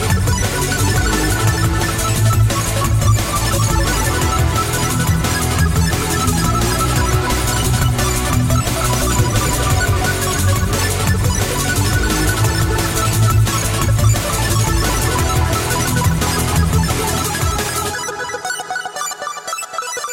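Nothing stood out on listening to the audio.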